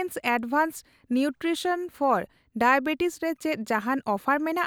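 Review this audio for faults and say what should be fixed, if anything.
No faults were heard; nothing needs fixing.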